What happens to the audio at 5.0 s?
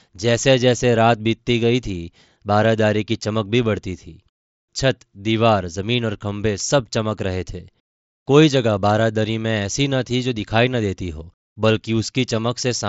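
Nothing goes wrong at 5.0 s: the speech carries on intact through that moment, with only the wideband, lightly grainy character of the Bluetooth mSBC headset link, which passes nothing above about 7.7 kHz.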